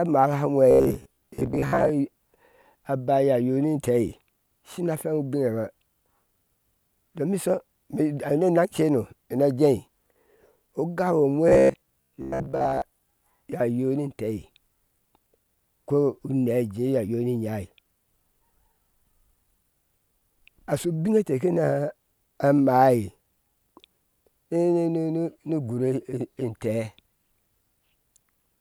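Speech with a robotic sound from repeated short buffers at 0.71–1.91 s and 11.49–12.82 s: a rigid 67 Hz buzz, likely from roughly 15 ms chunks replayed, about half then most of the audio.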